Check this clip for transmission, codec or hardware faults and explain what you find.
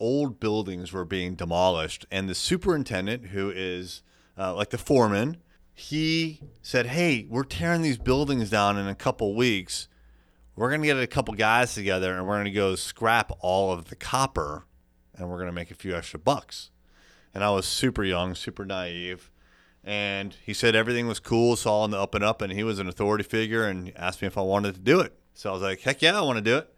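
No faults turn up anywhere in this speech recording. There is nothing in it that calls for an explanation.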